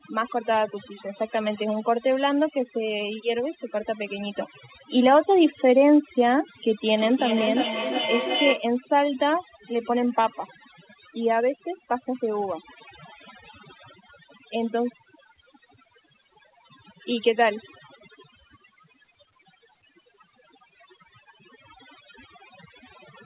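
Throughout the clip the background sits at near silence, broken by twinkling specks, and the softer parts of the speech are hollowed out. This is overdone noise removal: a noise reduction stage set far too aggressively pulled down any frequency band that came close to its noise estimate, so isolated specks of noise survive while quieter components of the speech get removed along with the background.

From 6.86 to 8.68 s, each stretch of speech comes back again at a steady interval of roughly 0.4 s, the repeats thinner and more ringing than the original and peaking at about 5 dB below the speech. This is feedback echo between two devices: one device played back what another device's microphone had sent, that microphone picked it up again, and neither echo canceller could remove sound from the other device. The band limit at 4 kHz heard throughout fits a G.711 A-law call path at 64 kbps.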